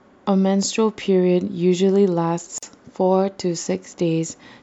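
A speech clip with a gap at a join of encoded pieces: at 2.58 s a gap of about 44 ms opens in the sound, which resumes at 2.63 s, picking up exactly where it stopped. The codec smears the edges of the gap, so the fully silent part is shorter. Separately encoded segments were concatenated without trimming, leaving each segment's start-up delay and final-frame padding in place. Such joins fall every 4.0 s of the stream.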